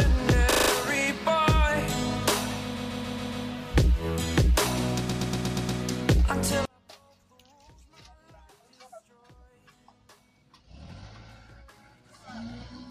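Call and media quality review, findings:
Repeated frames at 0.50–0.69 s, 2.76–3.45 s, 5.08–5.80 s: stutter from the same short block (about 28, 139, 109 ms) replaying five or six times, likely a duplicated compressed-frame run in transport or storage, adding 0.19, 0.70 and 0.71 s, about 1.6 s in total.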